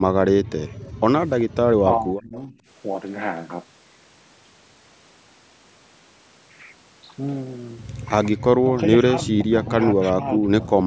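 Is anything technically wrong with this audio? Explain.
Yes. Three echo-canceller faults are audible.

Background gated by the echo canceller, 0.67 to 1.03 s: the canceller clamps the microphone while the loudspeaker plays, so the room sound drops by up to about 38 dB, then returns.

Echo leak, 0.84 to 0.88 s and 1.40 to 1.44 s: brief faint copies of the sound trail by 380 ms, likely residual loudspeaker pickup the canceller failed to remove.

Speech suppressed in double talk, 1.83 to 2.59 s, 8.63 to 9.73 s and 9.93 to 10.63 s: the talker dips by roughly 20 dB or more in pieces, likely the canceller attenuating everything while both sides speak at once.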